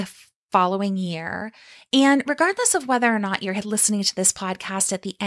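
The speech signal shows no technical faults at any point; level, continuity and timing all hold steady.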